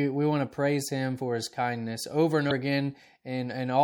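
A short speech recording with plainly audible lossy-codec damage throughout: the sibilants have a watery, swirling quality as weak high-frequency detail flickers in and out between frames. The likely cause is MP3 compression, at a bitrate around 64 kbps. From 2.47 to 2.51 s there is a brief glitch where damaged data in a compressed stream made the decoder misread frames and lose sync before locking onto the next valid header.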